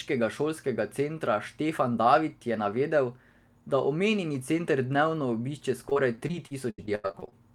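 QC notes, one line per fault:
5.89–7.33 s, repeated packet loss (robotic sound): roughly fourteen dropouts cluster here, the longest 85 ms. Each hole is bridged by stretching the preceding sound, so about 28% of the stretch is synthetic filler. The rapid patch-and-drop cycle makes the speech choppy.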